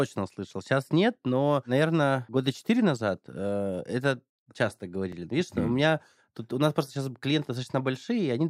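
Clock drift buffer slips, from 0.87 s to 7.25 s: about four regular clicks every 2.13 s, likely from mismatched device clocks dropping or repeating roughly 70 samples each time.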